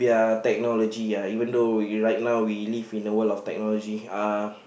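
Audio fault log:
No fault is logged for this clip.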